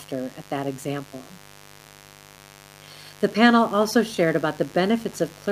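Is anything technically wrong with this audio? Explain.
Yes, the speech carries three technical faults.

Mains buzz runs through the whole clip at a 50 Hz mains frequency, sitting roughly 25 dB below the speech. Sharp switching spikes from a dimmer, rectifier or poorly shielded cable enter the signal twice per mains cycle. Because the spikes are so abrupt, they produce a dense ladder of 50 Hz harmonics reaching well into the kilohertz range. That gives a steady, raspy buzz rather than a smooth low hum.

Clock drift between sender and receiver is also present throughout. The sender's audio clock runs roughly 2% slower than the receiver's. Samples arrive a little more slowly than the receiver plays them out, so its jitter buffer keeps draining. The receiver has to keep compensating to avoid running dry. That ongoing mismatch is what drives the timing corrections described next, rather than being a separate sound of its own.

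Repeated timing corrections occur from 0.10 s to 5.20 s. To cope with the slow sender, the receiver repeatedly duplicates short pieces of audio, all in the same direction and at uneven spacing. Together they stretch that stretch to about 98% speed and add around a tenth of a second overall. Each edit is tiny, so the effect comes across as faint hiccups and a slightly unsteady, dragging tempo in the speech.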